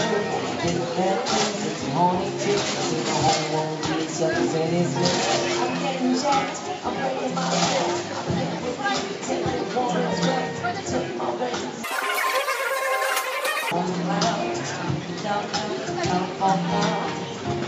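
From 11.84 to 13.71 s the audio suddenly races and jumps far up in pitch, about 19 semitones higher and three times faster, before returning to normal. This is a wrong sample rate fault. The samples in that stretch are played back faster than they were captured, with no resampling, so speed and pitch rise together by the same factor. A threefold ratio fits 16 kHz material being played at 48 kHz.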